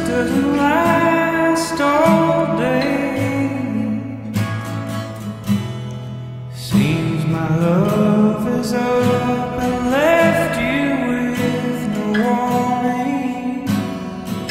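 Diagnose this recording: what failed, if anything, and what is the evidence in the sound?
Nothing in this recording points to a failure at any stage, so there's no fault to diagnose here.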